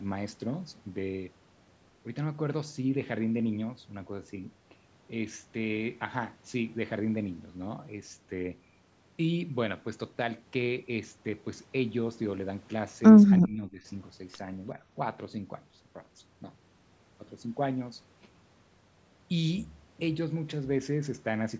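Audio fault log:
13.41–13.85 s, speech suppressed in double talk: the voice abruptly sinks by about 15 dB for roughly 0.4 s, then recovers. This is likely an echo canceller that, with both sides talking at once, mistook this talker for loudspeaker echo and turned them down. On the waveform the envelope shows a sudden notch; on the spectrogram that stretch fades below the call processing's 8 kHz ceiling.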